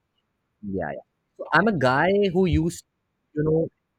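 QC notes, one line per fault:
No faults heard anywhere in this speech clip.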